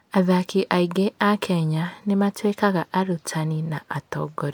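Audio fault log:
throughout: generation loss. The speech has a swirly, smeared, hollow quality beyond what a single lossy encode would give, with consonant attacks blurred. This likely comes from repeated MP3 decoding and re-encoding, around four passes at what sounds like 128 kbit/s. Each pass quantises again on a shifted frame grid, so noise and spectral holes build up from one generation to the next. The band extends to about 20.1 kHz, so the damage is not a lowpass cutoff.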